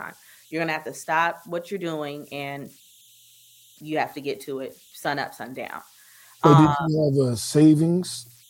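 A faint whistle near 3 kHz runs throughout, about 33 dB below the speech: converter idle tones from an undithered delta-sigma converter cycling through repeating bit patterns.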